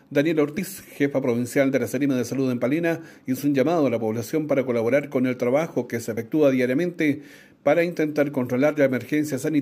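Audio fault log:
0.58 s and 6.17 s, compressed frames skipped: the audio jumps ahead by about two frames at the first spot and one at the second. That's roughly 50 ms and 30 ms of audio gone, with frames around 26.1 ms long.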